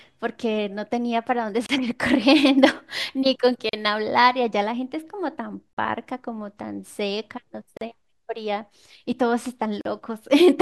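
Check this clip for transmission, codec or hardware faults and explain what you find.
There's one fault here, and it keeps coming back: a gap at a join of encoded pieces. Short silences open in the speech at 1.66, 3.69, 5.73, 7.77 and 9.81 s, spaced 2 s apart. The first lasts 29 ms and the rest 40 ms each. It sounds like the audio was encoded in 2-second chunks and stitched together untrimmed, so each encoder's start-up delay and end padding leave a dropout. The edges are smeared by the codec, and the speech resumes right where it stopped.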